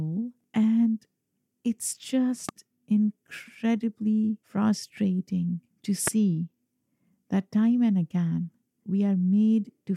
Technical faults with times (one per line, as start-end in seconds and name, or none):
2.49-2.51 loud pop
6.07-6.10 loud pop